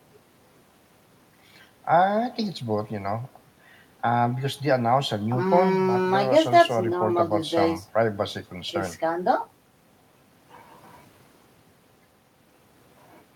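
No technical faults can be heard anywhere in the recording. There is nothing to place on a timeline.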